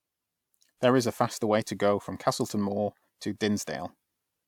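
A short speech recording with nothing technically wrong with it.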